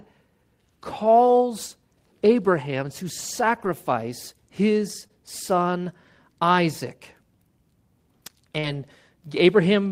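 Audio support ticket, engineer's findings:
Lost packet rebuilt from error correction at 1.03, 3.55–3.69, 5.03 and 8.63–8.77 s: no gaps, just rougher, noisier stretches. The decoder is playing the low-bitrate backup copies. The 80 ms runs likely span four separate lost frames.

Short concealed packet loss at 5.07–5.11 and 8.59–8.65 s: brief smear or wobble. The receiver filled about 20 and 40 ms holes by extending the preceding sound, then crossfaded back into the real audio.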